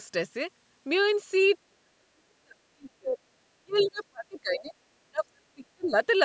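From 1.66 to 3.2 s the talker keeps dropping away in pieces, sinking by about 40 dB at the deepest and losing well over a second of sound in total. That's speech suppressed in double talk, likely the echo canceller hearing both sides at once, unable to separate its own talker from the loudspeaker echo, and clamping down on everything. It happens again from 3.6 to 4.73 s, with dips of about 30 dB, and from 5.06 to 5.95 s, again reaching about 40 dB.

Inside that second stretch, from 3.71 to 3.91 s, there's a faint scrap of the other side's voice leaking through, about 25 dB under the talker. The loudspeaker playback likely wasn't fully cleaned off the microphone, so a brief fragment slips into the mix.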